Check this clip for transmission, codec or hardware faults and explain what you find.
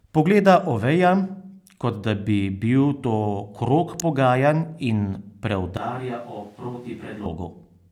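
Two faults are audible in this speech clip: a brief electrical snap and a stretch picked up by a more distant microphone.

An electrical switching spike occurs at 4.00 s, between "bi bil to krog" and "pogajanj in". It is a sharp snap laid over the speech, likely from a nearby switch or discharge arcing into the audio line.

A switch to a distant microphone runs from 5.77 s to 7.26 s. The speech abruptly turns hollow and roomy, thinner in the bass and roughly 5 dB quieter, with room noise only about 30 dB below it. This likely means the close microphone dropped out and a farther one carried the signal.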